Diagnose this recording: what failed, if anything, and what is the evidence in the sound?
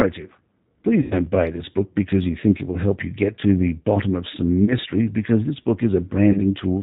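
Codec stage: the whole recording is band-limited to 4 kHz with a rough, synthetic texture, plainly audible damage that fits the G.729 codec rebuilding speech from a coarse filter-and-pulse model at 8 kbit/s.

Network stage: VoIP packet loss concealed by the speech codec at 1.02–1.27 s (90 ms lost, before "buy this book because"), 4.65–4.74 s and 6.32–6.40 s (30 ms each). The decoder extrapolated stretched, fading sound, and speech recovered slowly afterwards.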